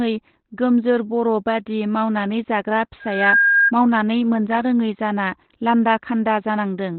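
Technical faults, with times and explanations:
Throughout: Opus compression, likely in its speech (SILK) mode at a low rate around 12 kbps. Nothing reaches above 4.2 kHz, so the speech sounds muffled, boxy and hoarse. Unlike MP3 damage it has few spectral holes and swirls less, just a narrow, coarse band.
2.99 to 3.72 s: loudspeaker feedback squeal, starting after "बर बादि मावनानै जाग्रा" and ending before "मावनानै मोनजारोङै जाना लान्दा". A single 1.6 kHz tone swells over about a third of a second to roughly 5 dB above the speech. The microphone was picking up its own loudspeaker, and the loop gain at that frequency exceeded one.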